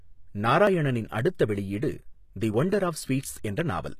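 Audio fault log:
Throughout, HE-AAC compression: the speech has a bright but gritty, metallic top, with s sounds turning lispy. This is likely high-frequency content rebuilt from lower bands instead of coded directly, as happens at a low bitrate near 20 kbps.
0.67 s, 1.56 s, 2.54 s, dropped buffer (overrun): each is a small jump forward in the speech, the last skipping noticeably more. The likely cause is samples overwritten before being read, losing about 10 ms twice and roughly 30 ms at 2.54 s.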